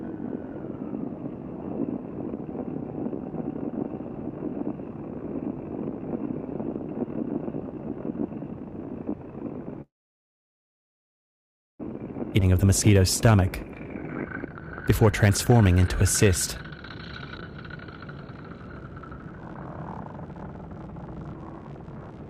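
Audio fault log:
9.81–11.80 s, call audio freeze: packets were likely held up and the jitter buffer ran empty, leaving almost two seconds of near silence before the sound resumes where it stopped.
12.37–13.01 s, jitter buffer speed-up: the receiver trimmed pitch-period slices to shed excess buffered delay, about 70 ms in total, so the sound runs 10% faster at unchanged pitch.
12.41 s, skip ahead: about a second and a half of audio was dropped while later audio was waiting, so playback jumps forward with the two sides joined almost directly.
13.84–16.80 s, jitter buffer speed-up: repeated pitch-period cuts removed roughly half a second to reduce delay, making the sound 18% faster and noticeably hurried at the same pitch.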